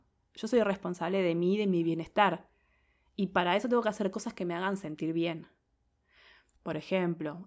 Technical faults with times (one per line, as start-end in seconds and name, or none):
none